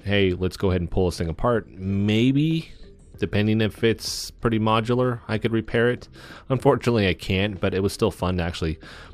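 No technical faults are audible anywhere here.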